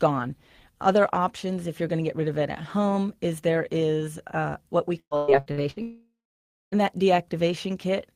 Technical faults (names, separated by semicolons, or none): repeated packet loss (robotic sound); long network dropout